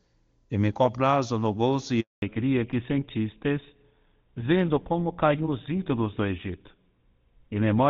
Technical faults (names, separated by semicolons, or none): handover gap; fallback to narrowband